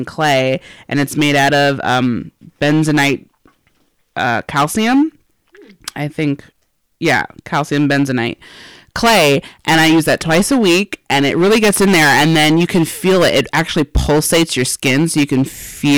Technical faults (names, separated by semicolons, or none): hard clipping